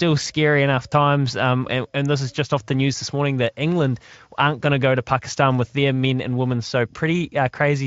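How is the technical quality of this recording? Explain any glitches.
Nothing goes wrong in this recording, so there are no glitches to explain beyond the light footprint its Speex coding leaves on the speech.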